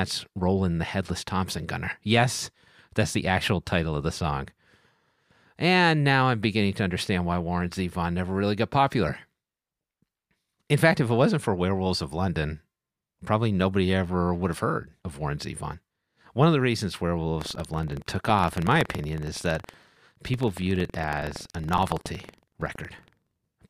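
After "of the reasons", at 17.37 s, writer and hardware reader slip: buffer tearing splices stale audio into each buffer, a 21.5 Hz robotic buzz until the end.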